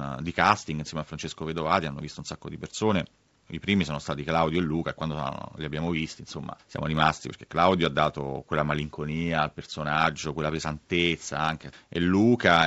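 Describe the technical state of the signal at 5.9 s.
At 5.9 s the speech is intact, with no fault present, and the G.722 wideband telephone coding it passes through at 64 kbit/s leaves at most a faint trace.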